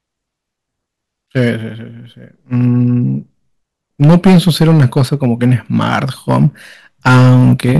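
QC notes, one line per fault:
1.37–1.49 s, 4.02–6.46 s, 7.06–7.79 s: hard clipping. Brief crackle on peaks at 1.37 s, then harsh fuzz on loud passages, as peaks overdriven by about 3, 11 and 10 dB are cut flat.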